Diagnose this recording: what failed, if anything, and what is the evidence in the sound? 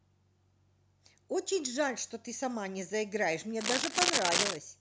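Cable scratch noise from 3.61 to 4.57 s: dense, uneven scratching a few dB above the speech, likely a worn connector shifting contact resistance, rougher than isolated digital clicks.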